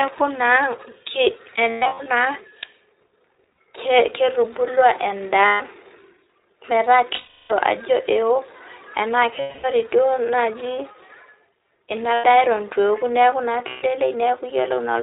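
Speech, carried end to end through the narrowband iLBC codec. Its sound fits the 15.2 kbps mode with 20 ms frames. Each frame's excitation is coded on its own, and nothing above 4 kHz survives, so the audio is band-limited and plainly rough and synthetic throughout. Packets also went missing, producing lost iLBC frames at 1.70–2.08, 3.57, 5.46–5.62, 7.14–7.52, 9.40–9.66, 12.14–12.26 and 13.68–13.83 s (the last just after "neaku na"). In each gap the decoder replays the last pitch cycle mixed with noise, so the sound becomes a held, slightly buzzy or breathy vowel, fading over the longer losses. The longest stretch, around 7.1 s, covers 360 ms, roughly 18 frames. The first spreads 260 ms of loss over 360 ms, with runs up to about a tenth of a second. Because frames stand alone, the sound recovers almost immediately after each gap.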